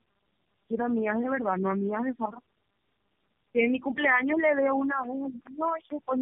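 Tandem speech coding runs through the whole clip: the speech sounds as though it passed through three low-rate speech codecs in succession, the last likely AMR-NB at 6.7 kbit/s. Each stage decodes the previous one's output and re-encodes it, so the coding errors compound. The result is rougher, more muffled and more warbly than any single codec would give, with nothing above 3.3 kHz.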